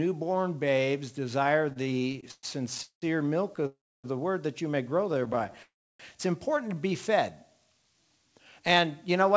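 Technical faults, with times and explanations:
1.70 to 3.66 s, repeated stalls (stutter): The sound halts and restarts about 20 times. About 0.51 s of filler is spread through this stretch, roughly a quarter of it. The longest hold lasts 192 ms. Packets kept arriving late, so the jitter buffer ran dry again and again. Each time, the last sound was stretched to cover the wait. Nothing is lost, but the flow drags.
3.66 to 4.06 s, call audio freeze: The sound hangs on its last moment, fades, then falls silent for about 280 ms. It resumes where it stopped, 373 ms later than before. Packets were likely held up in transit, emptying the buffer. The receiver bridged the hole with a fading continuation. Nothing is missing, but a gap has been inserted.
5.12 to 5.60 s, repeated stalls (stutter): Here there are 13 shorter hitches, none longer than 16 ms. Together they add 111 ms, about 23 percent of the span. 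The buffer again kept running empty. Each tiny pause was patched by extending the last sound. The result is a fine, jittery stumble rather than clear halts.
5.62 to 6.01 s, call audio freeze: The sound stops again. It trails off into about 310 ms of silence, then picks up where it left off. Everything after it now runs 370 ms later. The buffer likely ran empty once more, and the receiver filled the wait with a fading tail. No sound is lost, only delayed.
6.62 to 6.93 s, jitter buffer slow-down: The audio plays at about 86 percent speed with its pitch unchanged. Sounds are drawn out and may waver slightly. The buffer had too little in reserve. To rebuild it, the receiver repeated single pitch cycles or slices of pauses many times in a row. This added 52 ms to the stretch.
8.6 to 9.3 s, jitter buffer speed-up: The audio runs at about 107 percent speed with the pitch held steady, so it sounds a little rushed. 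The buffer had built up more audio than it wanted, as happens after late packets arrive in a bunch. The receiver trimmed out short pitch-length pieces, about 50 ms in all, to cut the delay.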